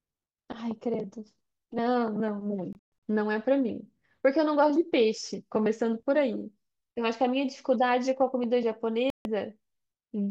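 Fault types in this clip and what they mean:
Bluetooth dropout: speech drops to silence in broken holes from 2.73 to 2.92 s, the longest 128 ms, and again from 9.10 to 9.25 s, likely from late wireless packets; unlike a stall, speech resumes further along rather than where it stopped.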